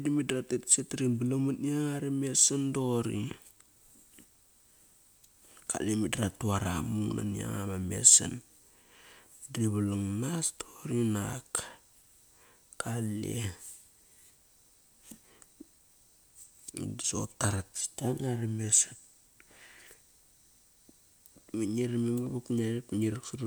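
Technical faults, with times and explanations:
No technical faults are audible in the speech.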